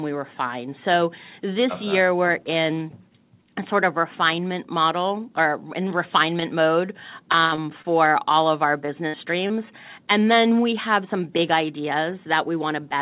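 From 7.32 to 7.89 s, repeated packet loss (robotic sound) chops the audio: four gaps, the longest 64 ms, are each patched by extending the previous sound. The patched gaps cover roughly a fifth of the stretch and give it a choppy texture with pieces missing.

At 8.86–8.90 s and again at 9.48–9.52 s, short concealed packet loss removes about 20 ms each time. Each is heard as a single brief smear or wobble, with no run of dropouts.

Between these, at 9.08–9.16 s, a burst of packet loss drops about 60 ms in one go. The last sound is held and fades as a buzz or hiss, and the audio then jumps ahead.

Throughout, nothing reaches above 4 kHz, which fits a narrowband call codec.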